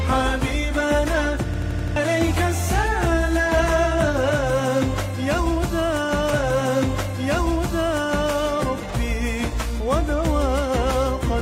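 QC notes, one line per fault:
1.54–1.96 s, system hang loop: the same 85 ms piece of sound repeats five times in a row at about 11.7 Hz, heard as a rapid mechanical stutter rather than a continuous tone. The computer or audio driver stalled while the output hardware kept cycling through its ring buffer, which fits a 4096-sample buffer. Roughly 0.4 s of the original audio never plays, because the loop stands in for it.
6.29–8.30 s, stream segment repeated: about 2.0 s of the programme plays a second time, with a blip where playback jumps back to the earlier point. The player fetched or queued the same segment twice, so the clip runs about 2 s longer than the original. The blip marks the join between the two copies.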